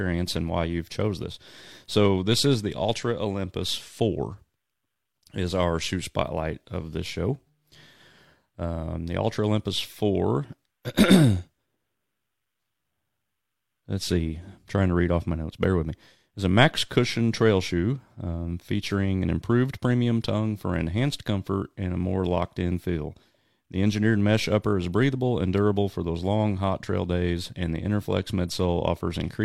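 No technical faults are audible.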